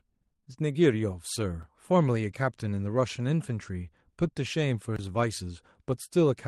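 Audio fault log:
0.33–0.54 s, repeated packet loss (robotic sound): choppy stretch as four short gaps, longest 21 ms, are patched by stretching the preceding sound.
1.63 s and 4.96–4.99 s, block of digital silence: a tick, then a brief hole, where 5.8 ms and 23 ms of zeros fit unfilled 256- and 1024-sample buffers.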